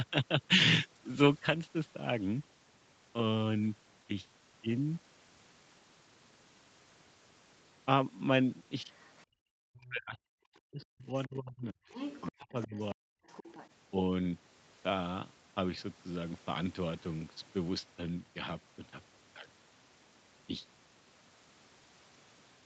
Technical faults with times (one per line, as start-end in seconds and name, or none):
8.92-9.23 other side's voice leaking through
9.26-9.40 background gated by the echo canceller
9.68-11.91 speech suppressed in double talk
11.91-12.32 other side's voice leaking through
12.39-13.19 speech suppressed in double talk
12.62-12.78 other side's voice leaking through
13.28-13.69 other side's voice leaking through